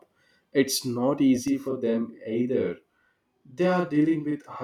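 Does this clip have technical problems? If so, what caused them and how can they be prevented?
Yes. A channel delay (doubling) begins at 1.48 s and runs to the end of the clip at 4.64 s. From that point one channel arrives 40 ms behind the other. When the two are summed to mono, the late copy is heard at the same level as a distinct doubling of the speech, close to a short slap echo. This points to a buffering mismatch in one channel's path. It can be prevented by aligning channel latencies before any mono fold-down.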